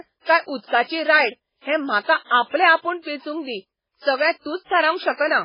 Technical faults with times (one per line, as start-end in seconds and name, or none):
0.00-5.44 MP3 compression